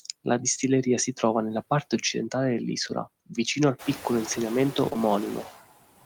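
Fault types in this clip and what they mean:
noise suppressor artifacts: Throughout the speech the background drops away in the gaps and swells back up under the voice. A suppressor is estimating what counts as steady noise in each frequency band and pulling those bands down, by about 18 dB here, frame by frame, so the residue shifts with every change in the speech rather than staying constant.
short concealed packet loss: Just before 5 s there is a brief smear or wobble in the speech, two close dropouts around 4.89 to 4.98 s, each missing about 20 ms of audio. The receiver filled each hole with roughly 15 to 16 ms of synthesised continuation of the preceding sound, stretching the passage by about 10 ms, then blended back into the real signal. The room noise rises around 4 s.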